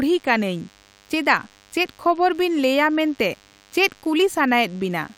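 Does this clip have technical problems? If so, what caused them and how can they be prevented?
Yes. A DECT cordless phone buzz runs under the speech from start to finish. It is a thin, steady buzz at 100 Hz, rich in harmonics, and it sits faint and well below the speech. A DECT handset or base station nearby sends a short radio burst every 10 ms. The audio circuit rectifies those bursts into audible pulses. To prevent it, keep DECT phones and base stations away from the microphone, cables and interface.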